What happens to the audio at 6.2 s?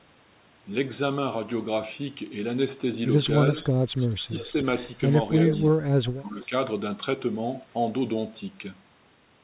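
Right around there the speech gets chopped down hard. Between 5.71 and 6.53 s the level dips, adding up to roughly half a second of affected sound, and the deepest dips are somewhere around 35 dB down, so it nearly vanishes. The likely cause is speech suppressed in double talk: with both ends talking at once, the echo canceller couldn't separate the near talker from loudspeaker echo and pulled everything down together.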